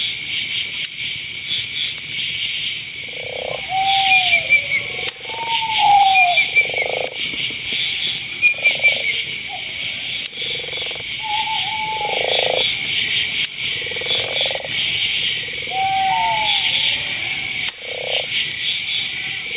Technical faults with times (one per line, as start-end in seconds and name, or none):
0.00-19.56 gain pumping